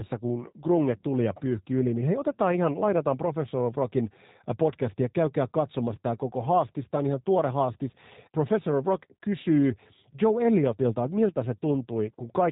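Throughout the speech, the G.729 codec has rebuilt the signal from a vocal tract filter, a pitch predictor and a few pulses per frame, at a rate that fits 8 kbit/s. Nothing above 3.8 kHz survives, leaving the speech muffled, plainly rough and synthetic.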